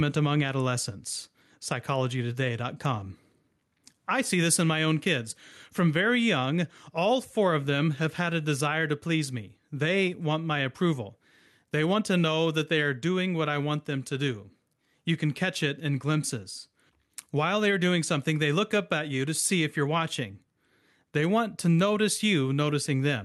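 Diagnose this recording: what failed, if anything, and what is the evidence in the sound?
Gain pumping runs through the whole speech clip, at the input stage: the gain swings by around 10 dB, pulled down on every loud syllable, so loud and soft parts end up closer in level and the sound is squashed. The likely cause is preamp gain set far too high with a fast limiter constantly clamping it. Unlike a noise gate, the gain is pulled down on loud sounds rather than the quiet parts being cut out.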